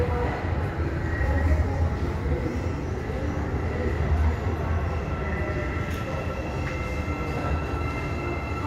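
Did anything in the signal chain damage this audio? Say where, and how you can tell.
Yes. A call bitrate drop hits the codec stage from 1.37 to 3.07 s. The sound turns coarse and muffled, consistent with the encoder being squeezed from about 96 to 23 kbps for roughly 1.6 s. A spectrogram shows the upper band vanishing, then returning.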